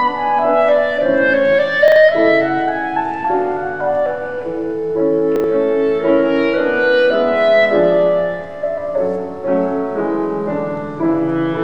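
At 1.88 to 1.96 s and again at 5.36 to 5.44 s, chunks out of order: one 40 ms chunk plays one slot late, swapping places with its neighbour. Each swap leaves a brief jumbled stutter, visible as three vertical discontinuities in the waveform and spectrogram.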